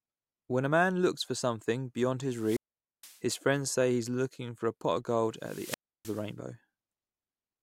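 Two wireless microphone squelch dropouts interrupt this speech. The first runs from 2.30 to 3.22 s, just after "looks for something beyond": hiss swells as the FM signal fades, then the receiver's squelch mutes the output for about 470 ms before speech returns at "friends say he is". The second, 5.36 to 6.32 s after "the pot of gold", follows the same pattern, with a shorter mute of about 310 ms.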